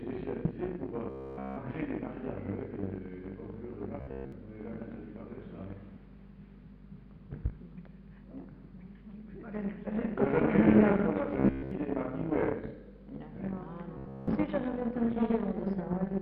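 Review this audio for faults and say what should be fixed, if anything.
Robotic sound from repeated short buffers occurs at 1.10–1.58, 4.01–4.32, 11.40–11.71 and 13.98–14.28 s. A rigid 66.8 Hz buzz replaces nearly everything in each span, likely from a roughly 15 ms slice being looped. On a waveform it appears as one identical cycle repeating, and on a spectrogram as evenly spaced harmonic lines. A larger playback buffer, so new audio arrives before the last block runs out, would prevent it.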